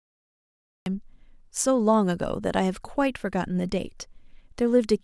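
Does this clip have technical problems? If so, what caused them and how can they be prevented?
Yes. Capture began late, after the speech was already under way, producing a cut-off start: the clip holds digital silence until 0.86 s, then the speech jumps in mid-sound with no natural onset or fade. Recording with pre-roll, or buffering audio before the trigger, prevents this.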